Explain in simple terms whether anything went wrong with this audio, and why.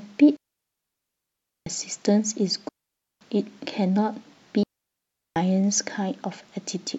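The digital wireless link dropped out three times, losing too much data, so the receiver muted itself: about 1.3 s from 0.37 to 1.67 s, 0.52 s from 2.69 to 3.21 s, and 0.73 s from 4.63 to 5.36 s. Each digital wireless dropout sounds like speech cut to clean near-silence, with no crackle.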